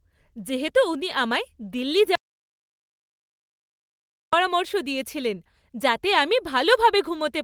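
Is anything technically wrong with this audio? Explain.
Yes. An audio dropout to silence runs from 2.15 s to 4.33 s: the speech cuts to silence, with no room tone, likely from lost input while recording continued.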